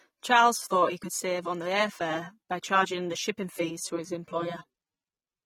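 It's a speech clip with AAC compression damage throughout: dull, smeared, fizzy sibilants and nothing above 18 kHz, likely from low-bitrate AAC-LC, which fits around 32 kbps.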